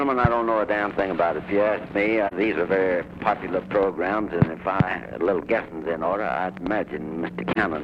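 At 2.27 s and again at 7.52 s the sound drops into a brief, soft-edged gap of about 43 ms, consistent with a single lost AAC frame each time: AAC frame loss with muting, where the decoder zeroes the missing spectrum and the overlapping windows fade out and back in.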